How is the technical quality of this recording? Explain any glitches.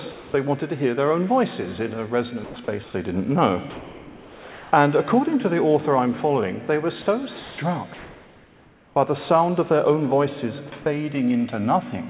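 The recording has two related faults, both from a call link that stops transmitting during pauses. The audio is band-limited with nothing above 4 kHz, which fits a G.711 A-law call path.

Comfort noise in place of the background appears at 0.12 to 0.34 s, 2.44 to 2.56 s, 2.84 to 2.94 s, 3.7 to 4.72 s and 7.94 to 8.96 s. The sender likely judged these gaps silent and stopped sending, so the receiver played synthetic noise instead. The real background, about 21 to 31 dB below the loud parts, becomes a flat hiss. Its level shifts slightly at most patches, from about 2 dB quieter to about 3 dB louder. On a spectrogram these stretches look smooth and textureless. In the waveform they appear as an even band of low noise.

Sound dropped by the voice detector occurs at 7.02 to 7.06 s and 7.4 to 7.58 s. Quiet parts of the sound were likely mistaken for background and replaced with the same steady noise. 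About 30 ms and 80 ms of real sound go missing, so the sound seems clipped off briefly before it resumes. A spectrogram shows the sound's detail cut short and replaced by uniform noise. In the waveform the envelope drops abruptly to a low, flat level.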